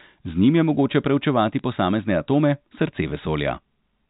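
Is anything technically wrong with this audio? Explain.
Yes. At 1.59 s, between "njim je mogoče preučevati" and "posamezne atome", there are bit errors on a digital phone line. A few flipped bits in the G.711 mu-law stream each corrupt one logarithmic sample, so a sign or high-order hit produces a sharp tick. On the waveform it appears as isolated single-sample spikes, and on the spectrogram as a thin vertical broadband line reaching the 4 kHz band limit.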